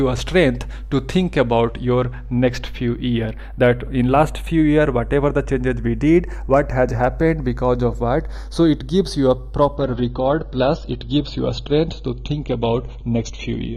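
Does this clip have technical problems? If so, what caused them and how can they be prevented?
Yes, there are two faults.

Channels drifting apart runs through the whole clip. The left and right channels appear to come from devices on separate clocks. A clock mismatch on the order of 20 ppm lets the interchannel delay creep to roughly 0.3 ms by the end. Summed to mono, that sliding delay forms comb-filter notches that move slowly through the spectrum, heard as a gradual flanging colour. To prevent it, lock both capture devices to a shared word clock or record both channels through one interface.

Adaptive stream at a lower bitrate begins abruptly at 9.77 s and lasts to the end. With no gap, codec artefacts rise. This fits a player switching from an AAC-LC rendition near 96 kbit/s to one near 24 kbit/s after the connection slowed. To prevent it, give the player enough buffer and bandwidth headroom, or set a higher minimum rendition, so it does not fall back to the low-bitrate version.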